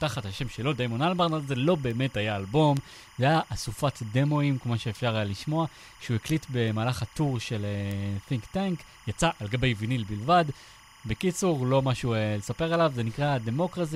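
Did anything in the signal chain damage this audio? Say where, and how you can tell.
Yes. There's timecode bleed running under the whole speech clip, which is an analogue wiring problem. A chirpy warble flipping between roughly 1 and 2 kHz sits about 25 dB below the speech. That's linear timecode from a neighbouring cable or track leaking in, and its rhythm fits 25 fps code.

There are also three bit error spikes at 1.91, 2.77 and 7.91 s, pointing at a storage or digital-link fault. Each is an isolated, broadband tick, about -21 dBFS for the first and about -15 dBFS for the other two, with nothing to do with the speech around it. Each one sounds like a flipped bit knocking a sample value off by a power of two for an instant, possibly a few samples in a row at 2.77 s.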